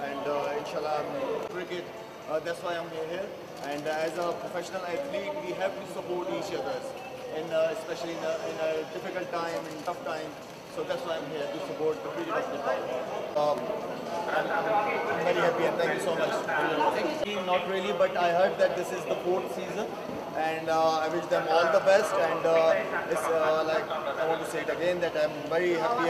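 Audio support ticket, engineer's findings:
Compressed frames skipped at 9.86 s, 16.47 s, 18.74 s: jumps where about 50 ms, then about 30 ms twice, go missing, which suggests two frames and one frame of a 26.1 ms codec frame. Probably in the decoder or a damaged file. Waveform envelope jumps; spectrogram shows a discontinuity at each join.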